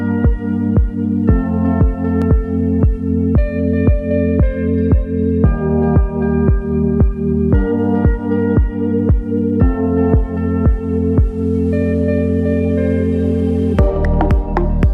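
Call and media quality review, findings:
No audible faults found in this clip. Nothing to escalate for this item.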